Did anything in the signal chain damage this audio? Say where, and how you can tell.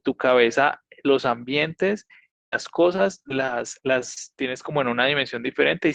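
Yes. Network stage, short concealed packet loss at 2.05–2.11 s and 2.19–2.23 s: the decoder stretched the last sound over roughly 40 ms and 20 ms holes, giving quick smears.

Lost packets rebuilt from error correction around 2.13, 2.21 and 2.52 s: each 20 ms frame came from a low-bitrate backup copy, so those moments sound rougher and noisier.

Long network dropout from 2.30 to 2.54 s: the sound trails off into about 0.2 s of silence, then resumes with a chunk missing. That's likely an outage where nothing arrived.

Repeated packet loss (robotic sound) from 2.96 to 4.18 s: six separate gaps, the longest 38 ms, each patched by concealment, leaving a choppy stretch.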